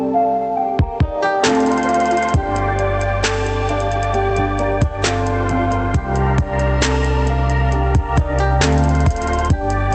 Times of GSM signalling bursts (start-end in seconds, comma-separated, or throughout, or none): none